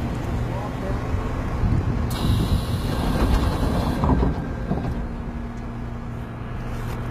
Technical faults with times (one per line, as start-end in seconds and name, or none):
0.00-7.11 HE-AAC compression